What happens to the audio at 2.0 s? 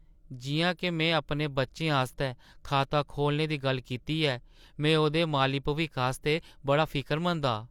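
Nothing goes wrong at 2.0 s; the speech there is intact, with no dropout, click, distortion or other fault.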